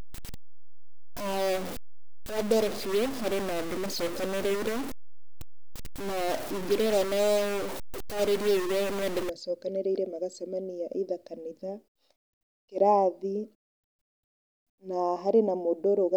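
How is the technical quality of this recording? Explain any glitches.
The recording has one clear fault, a stuck bit, in the first part of the clip. From 0 to 9.3 s, just before "macokanĩrĩire magacemania", one data bit was likely stuck, pushing samples by a step of around -30 dBFS. The speech turns harsh and buzzy, and the pauses fill with noise.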